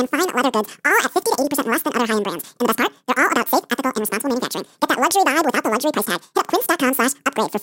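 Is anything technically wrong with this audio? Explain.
Yes. Throughout the clip, the speech plays as audio read two samples at a time (double speed). The reader groups each pair of samples into one frame, as if the mono stream had two channels or wider samples, so the speech runs twice as fast and sits 12 semitones, a full octave, higher.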